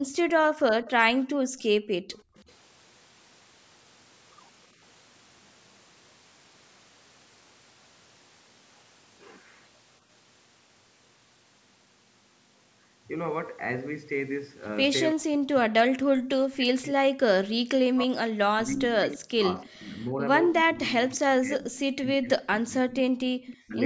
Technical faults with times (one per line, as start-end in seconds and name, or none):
0.00-2.36 background gated by the echo canceller
0.16-2.43 echo leak
15.12-23.77 speech suppressed in double talk
19.12-19.66 echo leak
21.73-22.40 echo leak
23.46-23.57 echo leak